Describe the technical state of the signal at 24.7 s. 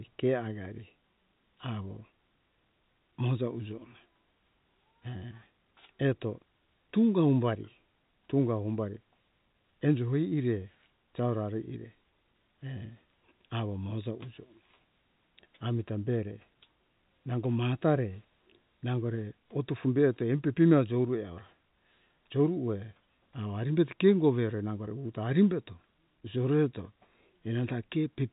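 At 24.7 s the signal is intact, carried as ordinary G.711 telephone coding that leaves nothing above about 3.8 kHz.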